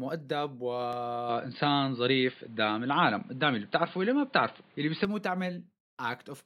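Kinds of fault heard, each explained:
Loud pop: a single sharp pop at about 0.93 to 0.96 s, roughly 10 dB above the speech, likely a voltage spike from a plug, switch or static.
Input switched to a poorer device: from 1.29 to 5.05 s the speech turns dull, nothing above 4.8 kHz, a few dB level shift, new background noise about 35 dB below the speech, likely a switch to a poorer microphone or a headset.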